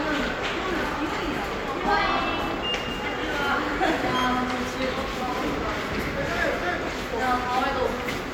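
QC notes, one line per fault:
Nothing to flag here; I listened through this one and didn't hear anything that needs a note.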